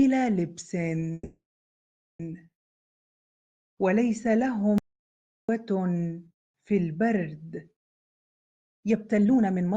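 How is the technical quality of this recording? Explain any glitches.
The recording has three clear glitches.

From 1.13 to 2.21 s there is a call audio freeze. The last sound hangs on as a fading buzz or hiss, then about 790 ms of silence. Likely, delayed packets emptied the jitter buffer. The audio resumes where it stopped, so nothing is lost, just delayed by 1.06 s.

From 4.78 to 5.49 s there is an audio dropout to silence. The sound cuts off abruptly and returns mid-flow. The gap is silence with no room tone, most likely from a lost input writing silence. About 704 ms of audio is gone.

From 7.94 s to the end there is a jitter buffer speed-up. The audio runs at 129% speed but keeps its pitch, so it sounds hurried. The receiver kept cutting tiny pitch-period slices, around half a second in total, to shrink excess buffered delay.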